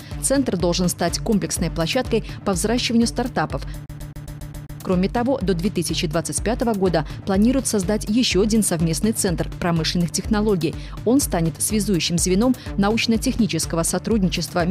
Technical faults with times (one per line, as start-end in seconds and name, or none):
3.86-4.80 CD stuck on one turn